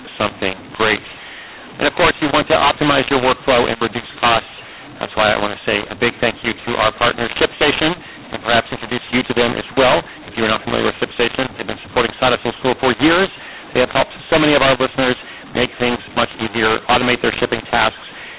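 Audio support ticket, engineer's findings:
Harsh, gritty distortion on speech throughout, pauses filled with hiss instead of silence. Probable cause: mu-law and A-law mixed up at the decoder. Audio appears written as mu-law G.711, read back as A-law, so levels are scrambled and the quietest samples are lifted well above zero.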